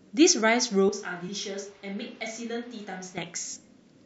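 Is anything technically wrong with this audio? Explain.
Yes. There are two faults.

From 0.89 s to 3.18 s the speech turns hollow and roomy, loses bass, drops by about 10 dB, and carries room noise roughly 20 dB below it, switching in and out abruptly. This is likely a switch to a distant microphone after the close one dropped out.

At 1.27 s there are compressed frames skipped. The decoder never played some frames, so the audio jumps ahead about 50 ms, which fits two missing frames of roughly 26 ms. Overlap between neighbouring frames smears the join into a brief blip rather than a click.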